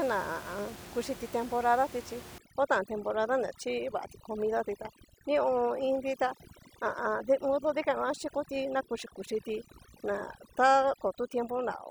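A speech recording with overdone noise removal from 2.38 s to the end. The room noise sits about 17 dB below the speech. The reduction pushes bands near that noise floor far down or off. The background drops and breaks up into twinkling specks. Quiet parts of the voice vanish too.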